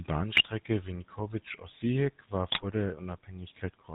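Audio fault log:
Throughout: GSM full-rate codec. The speech has been squeezed through the original GSM coder at 13 kbps, which rebuilds the voice from a vocal-tract filter excited by a sparse, regularly spaced pulse train rather than the real waveform. That decimated excitation gives the plainly audible buzzy, gravelly texture, and nothing survives above 4 kHz, so the sound is narrow and dull at the top.
0.32–0.46 s and 2.50–2.65 s: GSM bit errors. In each of these two short stretches the decoder receives corrupted data, with roughly 3% and 4% of bits flipped respectively, which fits about seven damaged frames apiece. Wrong filter, pitch and gain parameters distort the spectrum and throw the level around from frame to frame, so the speech briefly turns into squawking, popping and gargling before the codec's usual buzzy sound returns.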